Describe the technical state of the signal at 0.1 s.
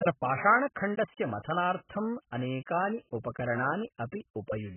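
At 0.1 s the speech already carries AAC compression damage, which runs through the whole clip rather than starting at a particular point. Nothing is present above about 3.1 kHz, and the remaining band sounds dull and smeared, with a warbling, fizzy texture on sibilants. The likely cause is AAC-LC coding starved of bits, which fits a bitrate near 8 kbps: the encoder drops the top of the spectrum and quantises the remaining frequency lines so coarsely that gaps and substituted noise become audible.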